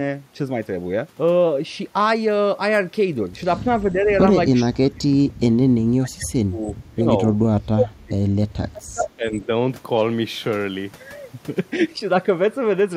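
Speech suppressed in double talk appears at 3.82–4.12 s, 4.63–5.77 s, 5.97–7.08 s, 7.53–8.23 s and 8.67–9.5 s. The speech dips slightly at first, then falls by roughly 30 to 35 dB in broken stretches, likely an echo canceller ducking the talker during overlapping far-end speech.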